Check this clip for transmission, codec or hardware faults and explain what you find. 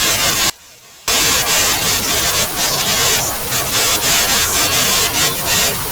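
One fault is present: an audio dropout to a faint residue from 0.50 to 1.08 s, about 580 ms. The speech cuts abruptly to a faint leak roughly 25 dB below normal level, then returns, likely from a momentary signal loss while the downstream path stayed live.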